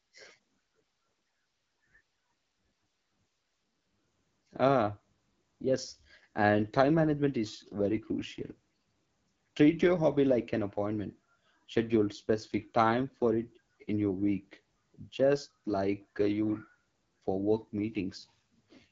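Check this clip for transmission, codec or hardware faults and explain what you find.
A codec fault runs through the whole recording. Throughout, the speech has passed through an AMR wideband (HD Voice) codec at a very low rate. The roughness points to about 8.85 kbit/s. At that rate the pulse-driven vocal tract model is too coarse, so the speech sounds plainly raspy and gritty. Above 6.4 kHz it carries only shaped noise, and nothing remains above 7.5 kHz.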